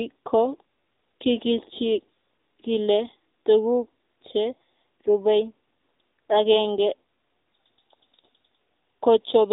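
A speech clip carrying AMR narrowband mobile codec damage throughout: nothing passes above about 3.8 kHz, and the voice has a plainly buzzy, synthetic edge. That points to AMR-NB at a low mode near 7.95 kbps, where few pulses per subframe drive the vocal-tract model.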